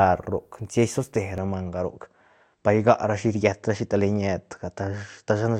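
A speech recording that turns duller at 1.38 s and stays so to the end. Nothing survives above 8.2 kHz, and a faint new noise floor appears, about 55 dB down. Level holds steady, with no gap. The likely cause is an input switched to a poorer device.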